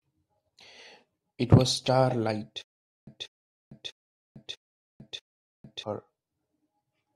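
Speech, with a stutter with silent gaps from 2.62 s to 5.83 s. A 191 ms fragment repeats five times, each followed by 451 ms of digital silence, every 643 ms. On a waveform or spectrogram it appears as identical blocks separated by flat, empty bands. The likely cause is a stalled stream replaying its last buffer, with the missing audio lost.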